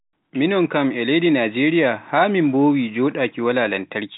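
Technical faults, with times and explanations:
Nothing stood out on listening to this speech recording.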